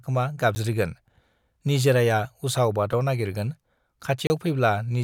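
Three blocks of digital silence cut into the speech. At 0.55 s a 10 ms gap ticks. At 2.93 s a 2.7 ms gap ticks. From 4.27 to 4.30 s a 30 ms hole opens. The sound cuts out and back without a fade.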